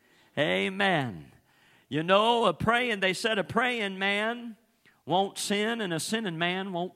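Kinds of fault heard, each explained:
No technical faults can be heard anywhere in this speech recording. There is nothing here that needs a fault explanation.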